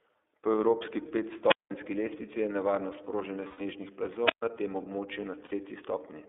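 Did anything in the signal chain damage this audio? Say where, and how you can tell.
Yes. The speech has been through the iLBC codec throughout. Nothing is heard below about 300 Hz or above 3.6 kHz, and the voice has a plainly audible rough, synthetic edge. That fits iLBC's 13.33 kbps mode, which codes each 30 ms frame's excitation independently.

A wireless microphone squelch dropout appears at the analogue radio stage, at 1.46–1.73 s just before "lestvici je nevarnost proženja" and again at 4.23–4.44 s. Each time, static rises as the FM signal fades. The receiver's squelch then mutes the output for about 190 ms and about 134 ms before the voice returns.

Lost iLBC frames show up at the network stage, at 3.48–3.61 s after "lestvici je nevarnost proženja" and at 5.45–5.53 s after "tem območju". These gaps last 120 ms and 60 ms, which fits four and two missing 30 ms frames. The decoder fills them with a repeated pitch cycle heard as a held, buzzy vowel, and the voice is right again almost at once.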